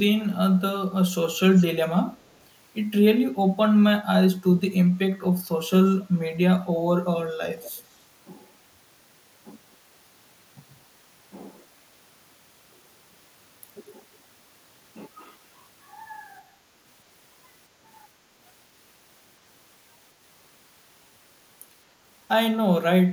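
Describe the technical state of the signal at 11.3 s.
At 11.3 s the speech signal is intact, with no audible fault at that point.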